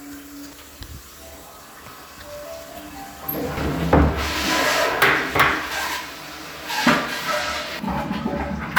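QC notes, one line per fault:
0.50–0.54 s, 3.57 s and 7.79 s, damaged data in a compressed stream: brief glitches where the decoder misreads corrupt frames and loses sync.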